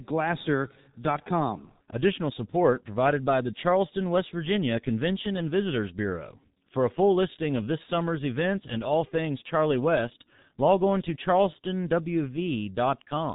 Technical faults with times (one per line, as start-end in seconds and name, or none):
0.00-13.34 G.723.1 codec